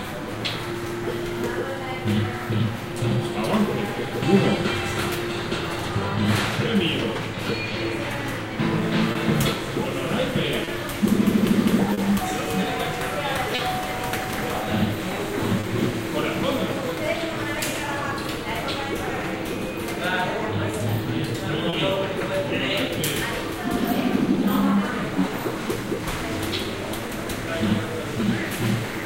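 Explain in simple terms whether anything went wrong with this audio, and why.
Clock drift between sender and receiver runs through the whole recording of everyday sounds. The sending device's clock runs about 3 percent slow, so audio arrives a little too slowly. Unlike a single glitch, this mismatch never goes away and drives everything else heard here.

Repeated timing corrections follow from it, from 0.38 to 10.33 s and again from 14.65 s to the end. The receiver keeps stretching tiny pieces, playing at 98 percent speed. That adds a fifth of a second in the first stretch and about a third in the second. It sounds like a faintly dragging, uneven pace, not a clear break.

Short stalls from a late packet occur at 9.12, 10.64, 11.93, 13.55, 15.60 and 21.69 s. Each time, the buffer briefly ran dry, and the last sound was held for 30 to 40 ms before continuing. Nothing is lost, which separates these from dropouts, where a piece of sound would be missing.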